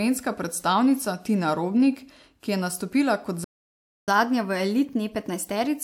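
A speech clip with two linked faults. Right after "je nastopila kot", a playback stall cuts the sound to silence from 3.44 to 4.08 s, a gap of about 0.63 s. The player likely ran short of data or its thread was blocked. From 4.08 s to the end, the player uses catch-up at higher speed to clear the backlog. It resamples to 1.1 times normal speed. Pitch rises by about one and a half semitones, so the speech sounds quicker and slightly higher.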